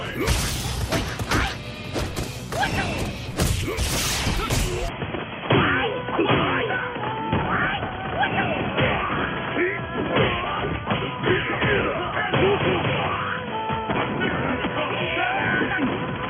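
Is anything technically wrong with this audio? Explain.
Yes. Input switched to a poorer device at 4.88 s, lasting to the end: likely a narrower-band input took over, cutting everything above 3.3 kHz, so the sound turns dull with no gap.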